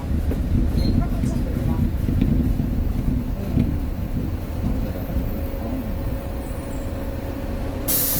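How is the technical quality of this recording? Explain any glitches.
The technical quality is held back by plainly audible Opus compression running the whole way through. The audio keeps its full bandwidth, extending to about 20.2 kHz, but its texture has turned noisy, rough and grainy. This likely comes from the codec's music mode working at a low bitrate, which fits roughly 24 kbps. Starved of bits, the encoder preserves each band's energy and fills the detail with folded or noise content rather than dropping it. What separates this from MP3 damage is less swirling and few watery holes: the spectrum stays full, just coarse.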